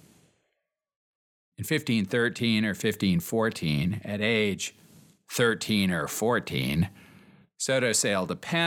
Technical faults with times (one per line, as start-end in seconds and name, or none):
none